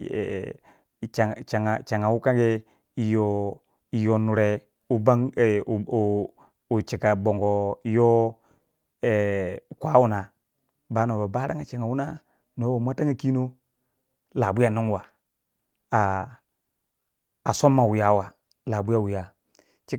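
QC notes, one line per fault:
No faults found.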